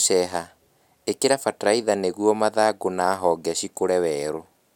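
Nothing stood out on listening to this speech recording.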